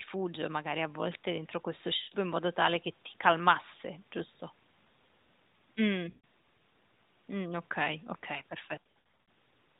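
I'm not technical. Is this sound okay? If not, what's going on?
No. There are lost AMR speech frames, small dropouts from a weak phone connection. Around 1.98 to 2.16 s (between "a volte entro questo" and "in modo tale che") and 6.10 to 6.25 s, the phone guesses, smearing then fading the voice. From 8.83 to 9.17 s, brief scattered blips.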